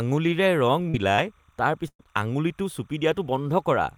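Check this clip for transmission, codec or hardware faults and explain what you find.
Three kinds of fault are present in this speech clip: timecode bleed throughout, three short concealed packet losses, and one burst of packet loss.

Timecode bleed runs the whole length of the clip. Linear timecode from an adjacent track or cable has leaked into the audio path. The code is a square wave running at 29.97 frames per second and flipping between tones near 1 kHz and 2 kHz, so it rides behind the speech as a steady chirping warble. It sits roughly 40 dB below the signal, which keeps it faint but persistent.

Short concealed packet losses occur at 0.89–0.96 s, 1.16–1.20 s and 2.03–2.07 s. Each time, a small stretch of the stream failed to reach the decoder in time: about 40 ms at the first and about 20 ms at each of the others. The receiver covered the hole by extending the preceding sound, either from its pitch or as shaped noise, and then crossfaded back into real audio. 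Each one is heard as a brief smear or wobble, and a short consonant may drop out.

A burst of packet loss runs from 1.88 s to 2.01 s. About 120 ms of audio never arrived. Concealment first stretched the last sound and then faded it, leaving roughly 70 ms of near-silence before playback resumed further along. The result is a held buzz or hiss that dies away, followed by a jump in which a fragment of speech is simply missing.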